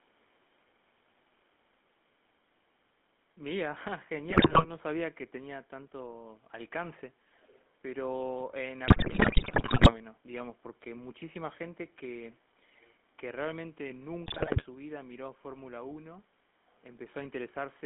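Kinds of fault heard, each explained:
GSM full-rate codec: The whole clip passed through the first GSM speech codec, which rebuilds the voice from a vocal-tract model fed by sparse, regularly spaced pulses, fitting a 13 kbps full-rate link. The speech carries that buzzy, gravelly roughness, plainly audible, within a narrow band of about 200 Hz to 3.5 kHz.
GSM bit errors: Corrupted bits from a weak radio link reached the decoder, scrambling filter, pitch and gain values frame by frame. The speech breaks into squawks, pops and gargling from 4.3 to 4.7 s, from 8.88 to 10.01 s, and from 14.26 to 14.63 s.
echo leak: The far end was likely on a loudspeaker whose echo canceller let part of the returning signal through. From 7.35 to 7.69 s a faint copy of the speech trails about 355 ms behind, far quieter than the speech itself, around 25 dB down.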